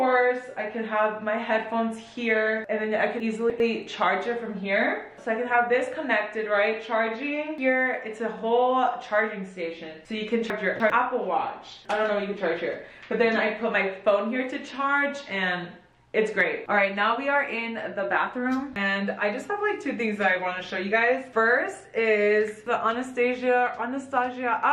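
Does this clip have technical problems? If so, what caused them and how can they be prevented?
Yes. At 3.2 to 3.6 s and again at 10.5 to 10.9 s the sound briefly jumbles. In each case chunks out of order are the cause: a 100 ms chunk was delivered or written late and plays after the three chunks that should follow it. Nothing is missing, but the sequence is scrambled and the edges don't meet. Tagging chunks with sequence numbers and reordering them in a buffer before playback or writing prevents this.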